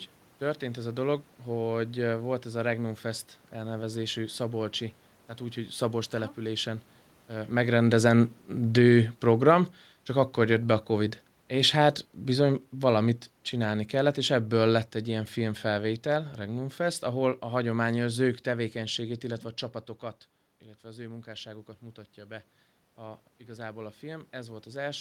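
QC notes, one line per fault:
7.56–9.65 s and 10.4–15.0 s, automatic gain falling: the control judged the input too loud and eased level down about 4 dB, then about 6 dB, before "ilyen filmfelvétel"; the room noise sinks along with it.
20.81–24.94 s, automatic gain rising: after "tevékenységét illetve a csapatokat", the input dropped about 13 dB, so the control gradually lifted gain about 6 dB; sound and room noise swell together.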